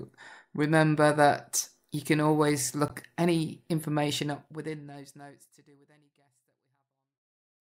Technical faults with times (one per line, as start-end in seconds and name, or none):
2.88-2.91 damaged data in a compressed stream